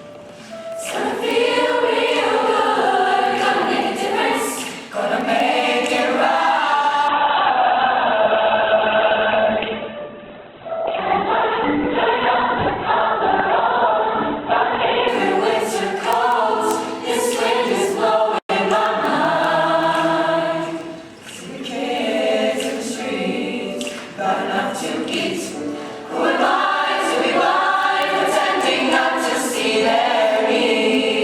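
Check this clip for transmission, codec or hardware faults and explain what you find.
Two faults are present: clock-slip ticks throughout, and a stretch of reduced streaming quality.

Word clock ticks, 0.14 to 31.14 s: an unlocked receiving clock drifts about 100 ppm, slipping one sample roughly every 0.2 s and producing about 150 sharp, uneven ticks.

Adaptive stream at a lower bitrate, 7.08 to 15.08 s: the stream switched down, which fits a drop from Opus 64 to 8 kbit/s. Nothing remains above 4.3 kHz, and the quality changes suddenly with no gap.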